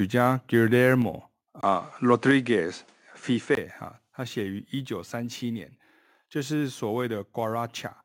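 Microphone volume stepped down at 1.02 s: the speech and the background drop together by about 3 dB in a single step, with no fade. This is likely the call software deciding the input was too hot and lowering the microphone's gain in one move. The loss affects everything the microphone picks up, so the sound simply becomes quieter rather than changing in tone.

Input switched to a poorer device from 1.61 s to 3.57 s: a brief silence of about 20 ms marks the change, and then the sound turns duller and narrower in band. The level shifts by a few decibels, and a new, quiet noise floor sits well below the speech. This likely comes from the system swapping to a different, narrower-band microphone mid-recording and then returning to the original input at 3.57 s, where the brightness comes back.

A second microphone volume step-down at 2.31 s, while the poorer input is still active, lowers the level by about another 3 dB in one abrupt step. 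This is likely another automatic gain reduction by the call software.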